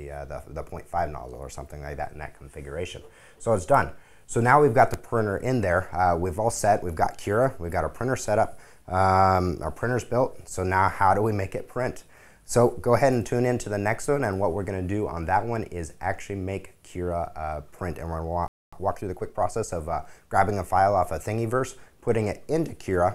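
At 18.48 s the audio drops out completely and stays silent until 18.73 s, a gap of about 245 ms, before resuming. This is a playback stall: the output stops in mid-flow for a clearly noticeable moment rather than fading or glitching. The likely cause is the player running short of buffered data, or its output thread being held up, so nothing reached the output until it recovered.

Immediately after the stall, from 18.73 s to 19.71 s, the audio runs hurried at 1.25 times normal speed while keeping its original pitch. This is time-compressed catch-up: having fallen behind, the player works off the backlog by dropping short slices of audio and cross-fading across the joins. That span lasts just under a second.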